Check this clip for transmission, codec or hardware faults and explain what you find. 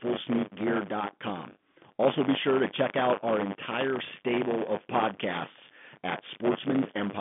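There is one fault, buffer tearing, across the whole clip, heard over the narrow telephone band of G.711 coding. A robotic 100 Hz rattle sits on the speech throughout. The ring buffer's writer and reader cross every period, so each splices in about a tenth of audio from roughly 30 ms earlier.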